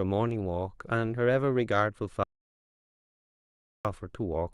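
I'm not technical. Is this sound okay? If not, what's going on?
No. From 2.23 to 3.85 s there is an audio dropout to silence: the speech cuts off and about 1.6 seconds are lost. Unlike a natural pause, the gap is dead silent, with no room background at all, likely because the microphone connection briefly failed.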